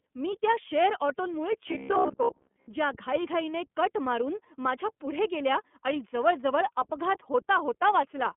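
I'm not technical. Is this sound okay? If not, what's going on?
No. Throughout, the speech goes through the iLBC codec, a phone-grade voice compressor. Everything above about 3.7 kHz is missing, so it sounds thin and boxy, with a rough, slightly synthetic grain. Unlike a plain phone-line muffling, it also adds that gritty artificial texture.

From 1.67 to 2.68 s, right after "मी त्या शेअर ऑटोंमुळे" and before "ज्या घाईघाईने कट मारून", you hear robotic sound from repeated short buffers. The speech becomes a rigid metallic buzz near 67 Hz, likely because audio arrived too late and short chunks of about 15 ms were replayed in place of most of the real sound. Unlike the codec's steady roughness, this buzz has one fixed pitch that follows the speaker's voice only roughly.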